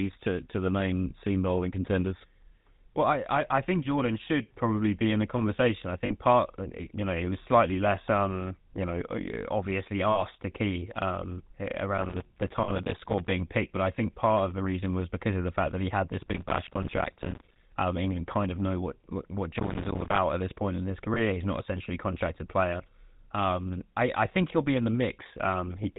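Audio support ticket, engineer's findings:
GSM full-rate codec on the whole path, audible throughout. Sound fits a 13 kbps GSM full-rate link. Vocal-tract model driven by regularly spaced pulses, excitation kept at one sample in three, nothing passed above 4 kHz. Result: band-limited, buzzy, gravelly speech, plainly audible damage across the full clip, roughness most exposed on higher-pitched passages.

Lost GSM frames at 1.10–1.13 s (after "to to the main", before "seam bowling contenders"), 6.06–6.13 s (after "in the conversation I"), 10.10–10.22 s, 12.64–12.71 s, 21.14–21.19 s. Decoder replaced each bad frame with the last good frame's settings. Gaps of 20 to 60 ms. Symptom: brief rough, metallic ringing hold in place of fresh speech.

Processor overload crackle at 11.98–13.31 s (after "to key um") and 19.59–20.18 s. Audio processor missed buffer deadlines dozens of times over each stretch, each miss filled with silence. 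Pattern fits buffers of roughly 5 ms. Symptom: gritty crackle and tearing riding on the speech, ending abruptly when the load clears. The first burst overlaps the 12.64 s frame loss.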